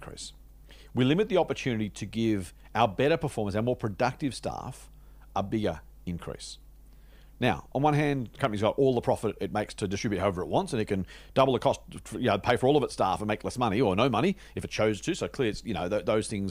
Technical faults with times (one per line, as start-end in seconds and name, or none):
0.00-16.50 mains hum